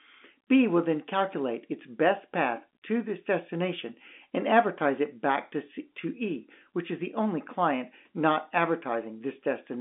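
Nothing is technically wrong with this speech recording, which has the sound of ordinary G.711 telephone coding at 64 kbps, with the line band running from 250 Hz to 3.5 kHz and nothing present above 3.7 kHz.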